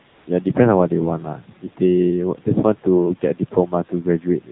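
The whole thing runs through the AMR narrowband mobile codec. Nothing gets above 4 kHz, and the buzzy, synthetic edge fits a low mode around 7.4 kbps.

From 0.08 to 0.26 s there's AMR comfort noise. The phone stopped sending speech frames for 180 ms, and the real background gets swapped for a smooth, steady synthetic hiss that switches in and out.

Then there's speech cut by the noise suppressor, between 1.37 and 1.81 s and again between 3.21 and 3.73 s. Each time, around a sixth of a second of speech gets mistaken for noise and pulled down by about 11 dB and about 12 dB, so those bits sound swallowed and faint.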